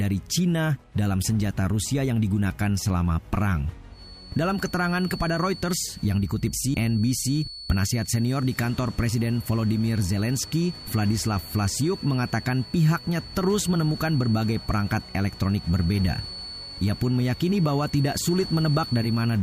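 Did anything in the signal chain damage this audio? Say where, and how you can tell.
Yes. From about 3.89 s to the end of the clip a thin, steady whistle at 4.4 kHz sits behind the sound, roughly 20 dB below it and swelling and fading slowly in level. That is a feedback whistle, and the stage is the analogue acoustic path: most likely a loudspeaker feeding back into the microphone with loop gain just at unity, so that single frequency keeps recirculating and sustains itself without building into a full howl.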